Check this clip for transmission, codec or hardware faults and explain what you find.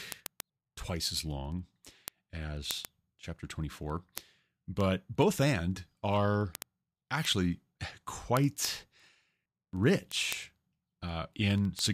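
A steady train of sharp ticks runs through the speech from 0.12 s to 11.93 s, one roughly every 70 ms, around 150 in all, some louder than others. These are word clock ticks. The receiving device runs on its own clock, unlocked from the sender's, and the two drift apart by something like 300 ppm. Each time they slip past each other, a single sample is dropped or repeated, and that discontinuity is heard as the click.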